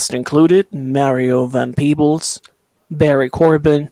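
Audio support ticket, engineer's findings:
No fault found in the speech audio on listening; nothing to action.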